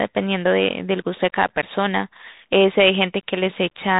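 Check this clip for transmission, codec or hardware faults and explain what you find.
The clip carries one fault, throughout: Bluetooth CVSD headset codec damage. Nothing passes above 3.8 kHz, matching a 64 kbps CVSD link. Its one-bit up/down coder lags on loud high sounds and s sounds turn scratchy over granular hiss. A spectrogram shows a hard ceiling near 3.8 kHz, and the waveform carries fine grainy noise.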